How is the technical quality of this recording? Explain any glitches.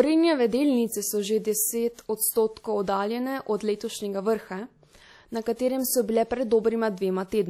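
The recording has plainly audible compression damage throughout. The likely cause is WMA compression at a low rate, which fits around 48 kbps. The transform codec smears quantisation noise over tens of milliseconds and zeroes weak components, so the speech rings and sounds washy, with hiss that breathes with it and nothing above 16 kHz.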